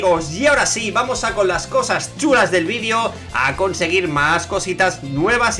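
No technical faults can be heard anywhere in this audio. Nothing in the signal calls for comment.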